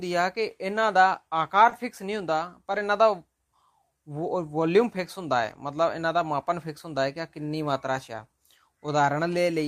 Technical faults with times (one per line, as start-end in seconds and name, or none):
1.69-1.73 short concealed packet loss
1.71-1.73 lost packet rebuilt from error correction
2.71-2.81 lost packet rebuilt from error correction
5.49-5.55 lost packet rebuilt from error correction
8.15 lost packet rebuilt from error correction